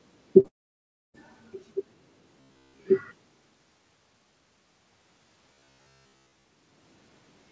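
At 0.40 s there's a short concealed packet loss. About 40 ms of speech never made it to the decoder in time, so the receiver stretched out the last bit of sound and blended back in by 0.46 s. You hear it as a quick smear in the speech.

Right after, from 0.48 to 1.16 s, the audio just goes away, likely a long network dropout. Roughly 660 ms never arrived. The concealment barely carries on at the start, and then it's about 630 ms of near silence before the speech picks up again further along, with that chunk simply gone.

From 2.41 to 2.85 s and again from 5.53 to 6.45 s, the speech turns into a stiff metallic buzz at about 67 Hz. That's robotic sound from repeated short buffers, likely caused by the player looping the last short slice of audio whenever new audio ran late. A 67 Hz buzz fits a buffer of about 15 ms. Most of the audio in those spans is repeats, which is why it still follows the speech only loosely.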